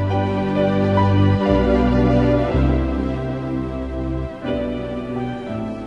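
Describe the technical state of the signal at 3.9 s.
At 3.9 s the signal is intact, with no audible dropout, distortion, clipping or other technical fault.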